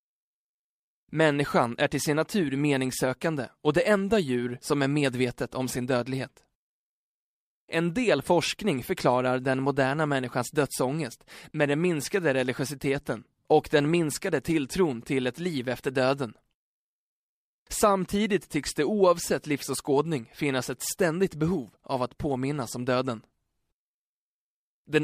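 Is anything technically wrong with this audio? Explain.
No, nothing is technically wrong with this audio.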